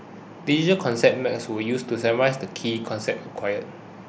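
No technical faults can be heard in this speech.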